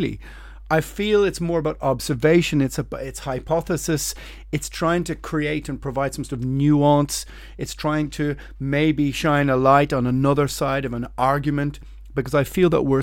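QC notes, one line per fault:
No faults were found in this speech recording. Nothing here calls for a QC entry.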